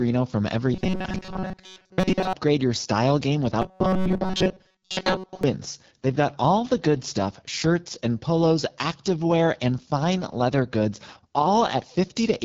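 AMR wideband (HD Voice) codec runs throughout the speech. Its 8.85 kbit/s rate, one of the two lowest, leaves a rough, raspy edge on every phrase. The pulse-driven vocal tract model is starved of bits, and the band stops at about 7 kHz.

Robotic sound from repeated short buffers appears from 0.74 to 2.33 s, ending just before "your style game", and again from 3.62 to 5.43 s, starting just after it. A rigid metallic buzz at 188 Hz replaces most of the speech. This likely comes from a buffer of about 5.3 ms being looped while the real audio is skipped.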